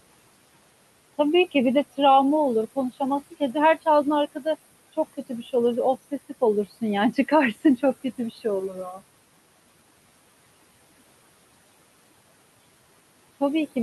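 Noise suppressor artifacts run through the whole clip. The suppressor pulls the steady room noise, which sits about 19 dB below the speech, down by about 20 dB in each band it judges to be noise. The noise sinks between the words and rises under them.

Speech cut by the noise suppressor occurs at 4.93 to 5.54 s, 7.12 to 7.32 s and 8.04 to 8.45 s. The suppressor mistook quiet speech for background and dropped it by about 19, 12 and 10 dB respectively, over roughly 150, 100 and 100 ms respectively. Those moments sound swallowed and faint.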